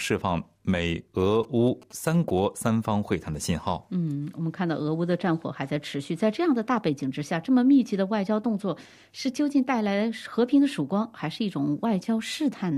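A galloping dit-dit-dit of short 217 Hz buzzes, well below the main sound, runs from 1.20 to 2.40 s: GSM signalling bursts from a nearby 2G phone, rectified by the audio circuit.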